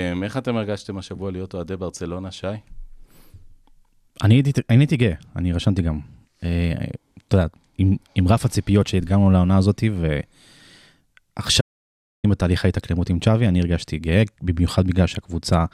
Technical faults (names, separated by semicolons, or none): audio dropout to silence